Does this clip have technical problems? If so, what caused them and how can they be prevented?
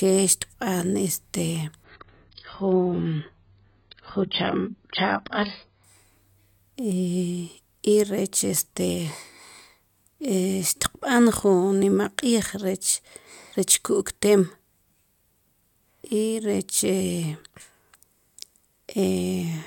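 Yes. From 1.84 to 5.84 s, an adaptive stream at a lower bitrate cuts everything above 5.3 kHz with no gap, a flat spectrogram ceiling that points to a slowed connection. A steadier connection or a larger playback buffer would prevent it.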